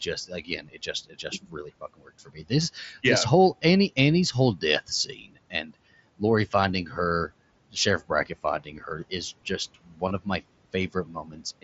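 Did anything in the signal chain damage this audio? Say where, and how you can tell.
Yes. Call processing: speech cut by the noise suppressor at 0.06–3.04 s (before "yeah this whole"), 4.32–5.75, 6.86–7.3, 7.7–9.12, 9.74–10.41 and 10.73–11.64 s. Gain dips of about 8–21 dB swallow speech, and the spectrogram shows syllables fading into the noise floor.

Bluetooth link: concealed headset packet loss of about 22 ms at 2.87–2.89 s, just before "yeah this whole", and at 10.08–10.11 s. This fits a few lost frames patched by repeating recent waveform, which shows as a repeated stretch in the waveform and smeared harmonics.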